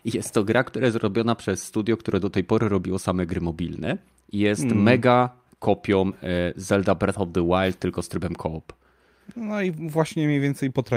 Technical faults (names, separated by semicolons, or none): none